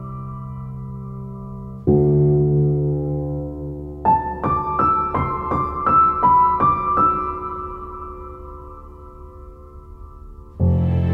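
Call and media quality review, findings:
No call or media quality findings to report for this clip.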